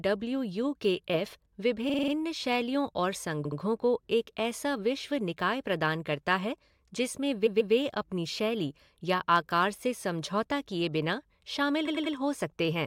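Speech with repeated frames at four points. Each is a stutter where a short block of coded audio plays again. At 1.88 s, just before "शैलियों और", a 46 ms block repeats five extra times. At 3.44 s, between "शैलियों और" and "को एक ऐसा", a 70 ms block plays twice more. At 7.46 s a 139 ms block repeats twice. At 11.87 s a 93 ms block repeats three times. Together they add about 0.93 s.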